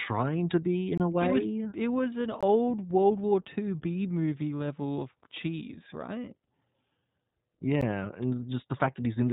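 Throughout, the speech carries iLBC codec damage: nothing above 3.8 kHz survives, and each 20 ms frame's excitation is coded independently, leaving a plainly audible rough, synthetic edge consistent with the 15.2 kbps mode.

Three blocks of digital silence occur. From 0.98 to 1.00 s, after "to be", a 23 ms hole fits a 1024-sample buffer; at 2.41 s, after "it was an", comes a 20 ms gap; at 7.81 s a 12 ms dropout fits a 512-sample buffer. Each is likely a missed output buffer filled with zeros; the first two are heard as short holes, the 12 ms one as a tick or dip.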